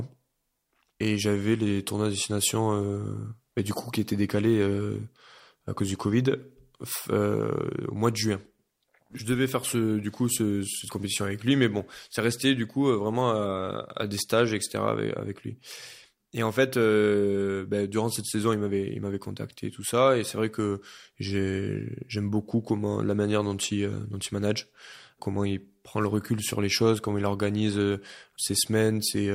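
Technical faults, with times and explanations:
No technical faults can be heard anywhere in this recording.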